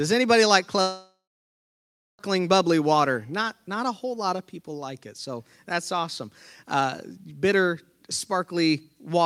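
Right after "anybody like", at 0.81 s, the speech stops until 2.21 s. The last sound smears into a fading buzz, then there's about a second of near silence. It picks up at "bubbly water" with roughly 1.4 s gone, likely a long network dropout.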